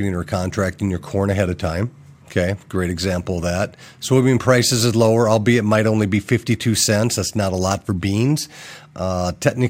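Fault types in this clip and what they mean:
No faults can be heard.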